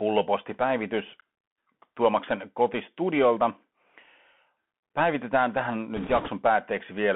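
Throughout, the speech carries the Bluetooth CVSD headset codec's narrow line band of about 150 Hz to 3.5 kHz, which fits a 64 kbps one-bit delta stream whose adaptive step lags loud high sounds, leaving s sounds scratchy over granular hiss. A spectrogram shows a hard ceiling near 3.5 kHz.

From 5.97 to 6.29 s, bit errors on a Bluetooth voice link add a rushing crackle, with roughly one bit in twenty flipped. Each bit moves the signal only one step, so there are no loud clicks, though each error grows with the speech level. The spectrogram shows an in-band smear, and the waveform thickens without spikes.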